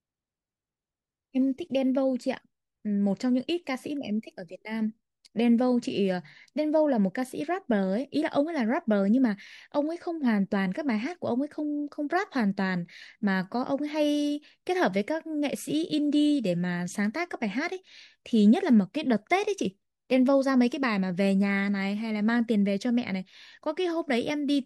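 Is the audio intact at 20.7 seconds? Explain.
Yes, the speech at 20.7 seconds is intact, with no audible fault at that moment.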